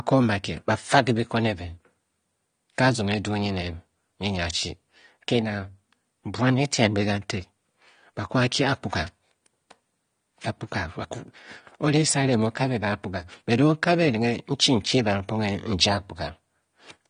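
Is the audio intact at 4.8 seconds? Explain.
No. At 4.8 seconds the speech carries AAC compression damage, present throughout the clip. Nothing is heard above 9.7 kHz. The codec likely quantised the spectrum coarsely, which fits a low bitrate near 32 kbps. Sibilants sound dull, smeared and plainly warbly.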